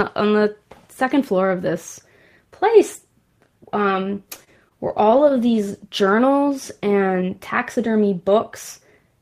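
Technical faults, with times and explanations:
4.15–5.93 s repeated stalls (stutter): the jitter buffer ran dry fifteen times, gaps up to 29 ms refilled with repeated sound; spectrogram shows brief frozen, smeared slices.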